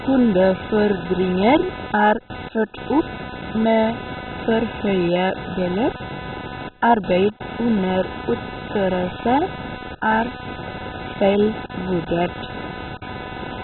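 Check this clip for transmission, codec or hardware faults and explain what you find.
Two problems run through the whole speech clip, start to finish.

First, there's computer activity noise: a buzzy, chirping pulse train around 300 Hz sitting only about 10 dB below the speech. It comes from the computer's own load swings (processor, graphics, mouse) dragging around the ground that the audio circuit shares. Because it follows what the machine is doing rather than the talker, it keeps grinding away even in the gaps between phrases.

Second, the speech is badly band-limited and mangled, with nothing at all above 4.1 kHz, and this is likely MP2 compression starved of bits. MP2 divides the audio into 32 equal sub-bands and hands out bits to each; at a rate this low, which points to something down around 16 kbps, the upper bands simply get switched off and the rest are quantised coarsely. The result is a dull, muffled tone with a gurgling, granular roughness all the way through.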